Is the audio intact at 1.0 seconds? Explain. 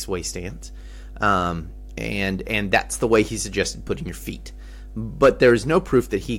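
No. Mains hum runs through the whole clip, so it is present at 1.0 seconds as well. A ground loop or a transformer close to the wiring has let the 50 Hz power line leak into the signal path, laying a steady low drone under the speech, together with a few low harmonics. It sits only around 15 dB below the speech.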